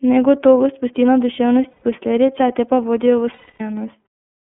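Throughout, the speech sounds thin, slightly rough and synthetic, with nothing above about 3.4 kHz and little below 200 Hz. That is the iLBC codec: a narrowband VoIP coder whose plainly audible damage fits its 13.33 kbps mode with 30 ms frames.

At 1.71 s, and again at 3.33 s, the voice turns into a held, buzzy, breathy vowel for about 120 ms and then about 270 ms, fading during the longer gap. These are lost iLBC frames, consistent with four and then nine missing 30 ms frames. The decoder fills each gap by repeating the last pitch cycle mixed with noise, and speech recovers almost at once at 1.83 s and 3.61 s.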